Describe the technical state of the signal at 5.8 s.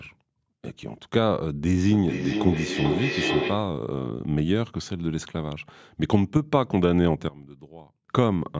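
At 5.8 s the speech is intact, with no dropout, distortion or other fault, only the normal bass trimming and limited top end of a call microphone path.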